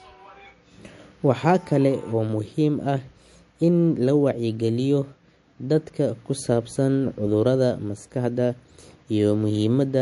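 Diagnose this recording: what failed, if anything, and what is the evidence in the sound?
The codec stage failed, likely through MP3 compression. Throughout the speech nothing is present above 11.3 kHz, and codec damage is plainly audible. Short of bits, the encoder has removed the treble and the weakest frequency lines, which fits a bitrate around 48 kbps.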